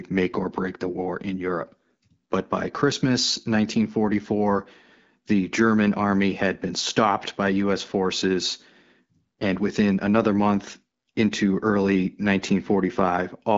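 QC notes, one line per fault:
The speech passes through the AMR wideband (HD Voice) codec with only light coding texture and no content above 7.5 kHz, which fits a rate of about 12.65 kbit/s.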